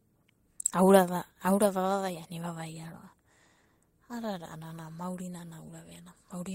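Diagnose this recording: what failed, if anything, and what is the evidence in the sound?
Nothing failed: the recording shows no evidence of any fault in the sound.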